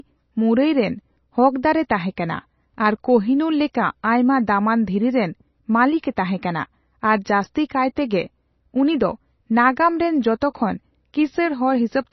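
Throughout, nothing sounds above 5.9 kHz, and sibilants swirl. Likely heavy MP3 compression, near 24 kbps, starved the encoder, which dropped treble and weak detail.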